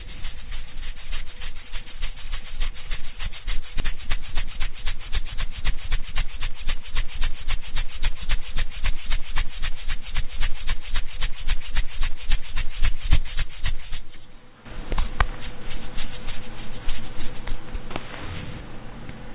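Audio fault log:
3.8 s, skip ahead: roughly one and a half seconds of sound is simply missing, and the material on either side is butted together with no silence or concealment filling the join. Unlike a dropout, nothing pauses; the timeline jumps forward abruptly.
3.92–6.63 s, jitter buffer speed-up: the sound runs about 7% fast, losing around a fifth of a second overall, as the receiver trims short pitch-period slices to drain its excess delay. Pitch stays put, which separates it from resampling; the G.711 call path's 4 kHz ceiling holds throughout.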